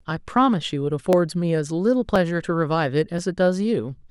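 From 0.11 s to 3.18 s the speech carries a short click about four times, spaced about 1.03 s apart. The steady spacing points to clock drift buffer slips: two devices likely run on separate clocks differing by roughly 700 parts per million, so the buffer between them creeps toward full or empty until a few tens of samples are dropped or repeated. Each slip breaks the waveform abruptly and is heard as a click.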